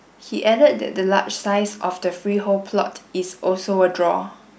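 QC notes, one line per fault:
No faults heard in this speech clip.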